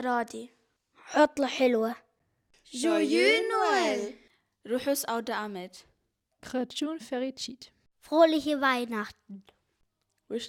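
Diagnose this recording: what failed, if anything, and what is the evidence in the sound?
The fault is at the playback stage: a gap between stream segments, heard as hard-edged silent holes at 2.19 s and 6.20 s, about 4.0 s apart, adding about 7.6 ms and 4.2 ms. Mismatched segment timestamps leave holes the player fills with silence. Unlike a dropout, nothing is missing; the sound simply resumes slightly later.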